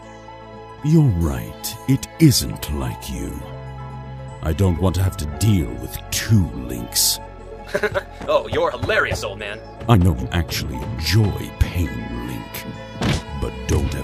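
From 7.24 to 10.30 s there is a time-stretched section at twice the speed. The pace jumps abruptly while pitch holds, sounding rushed, likely from dropped fragments.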